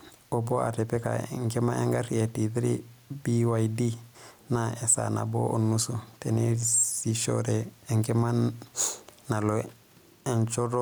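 All the way through, there's gain pumping: the room noise, sitting about 44 dB under the speech, swells in the pauses and ducks by roughly 5 dB whenever speech comes in, likely an overdriven input being clamped by a fast limiter.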